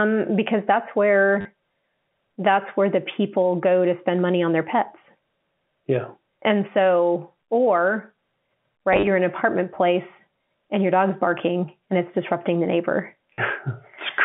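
At 1.41 s, right after "because that's", and again at 13.34 s, after "it's disrupting the neighbor", there's packet loss with the last packet repeated: 40 ms gets filled by replaying the previous chunk, giving a robotic stutter. Around 8.93 to 9.07 s, just before "in an apartment place", about 80 ms of losses are scattered across 140 ms, with runs up to 30 ms. The buzz in these repeats points to roughly 10 ms packets, so around 100 Hz, all heard through a narrow telephone-band G.711 line.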